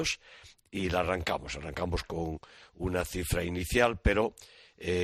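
Throughout, the sound is dull and gurgling with granular distortion, likely MP2 compression starving upper sub-bands of bits, which fits an 80 kbps encode.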